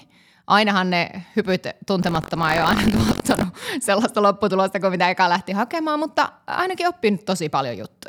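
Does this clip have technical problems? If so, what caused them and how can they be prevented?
Yes. From 2.01 to 3.45 s, just before "sellaista lopputulosta kuin mitä", the speech picks up a robotic buzz at 46.9 Hz, which is buffer tearing. The writing side and the playback hardware have drifted out of step on the ring buffer, so in every period roughly a tenth of the buffer still holds audio from about a tenth of a second earlier, spliced in with abrupt joins. The buzz rate fits a 1024-sample buffer. Keeping the writer synchronised to the hardware read pointer, with adequate headroom so the two never cross, prevents it.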